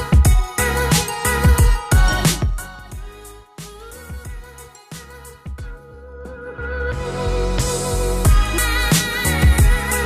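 A ticking, zipping texture rides on the audio while its level moves, first from 2.26 to 2.8 s as it falls by around 20 dB at roughly twenty ticks a second, then from 6.08 to 7.16 s as it climbs back by around 20 dB at roughly ten a second. This is zipper noise: the gain changes in coarse jumps of about 2 dB with no smoothing, and each jump leaves a small click.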